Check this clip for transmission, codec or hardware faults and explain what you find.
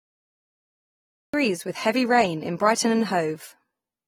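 Two faults here: a late, chopped start and codec damage that runs all the way through the speech.

The cut-off start: the first 1.34 s are dead digital silence, then the audio jumps in mid-sound right before "with heavy rain in". Capture or streaming began late, so there's no natural onset, just an abrupt, clipped entry.

Throughout, the speech sounds dull and smeared, with a fizzy, warbling edge on sibilants and nothing above 19.4 kHz. That's likely AAC compression, AAC-LC at a low bitrate around 32 kbps, where coarse quantisation against a hearing model thins and blurs the spectrum.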